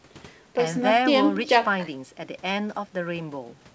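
Nothing here counts as a fault: the speech simply runs through a normal call chain, and the way everything above 8 kHz is missing fits a wideband call codec such as G.722 doing its ordinary job.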